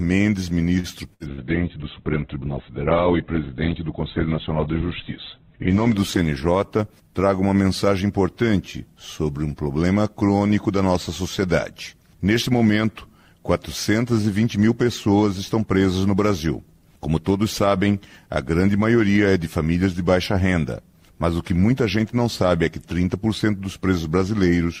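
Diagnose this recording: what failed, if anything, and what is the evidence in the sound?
The network hiccups first, at 0.79 to 0.87 s, with a short stall from a late packet. A packet missed its slot, the jitter buffer ran dry, and the receiver held the last bit of sound for about 45 ms until the packet turned up, then carried on from the same spot. Nothing is actually lost. You just hear that moment drawn out with a faint buzzy sag, and playback sits about 45 ms later from then on.

Then comes a burst of packet loss, twice, at 1.14 to 1.23 s and again at 1.32 to 1.41 s. Both are network problems. Each time a run of audio never arrived in time, so the receiver stretched the last sound across roughly 60 ms and faded it, giving a held buzz or a dying hiss. When the audio comes back it has jumped forward, and about 60 ms is gone in each gap.

Overlapping those, from 1.29 to 8.06 s, there's a call bitrate drop at the codec. 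The bandwidth estimate collapsed, and the encoder was pushed from 64 kbps down to 8 kbps and stayed at the bottom for about 4.2 s. At that rate Opus codes coarsely and pulls the top end in from 20 kHz to 4 kHz. The sound goes muffled and watery, a bit gritty, and opens back up once the rate recovers after 8 s.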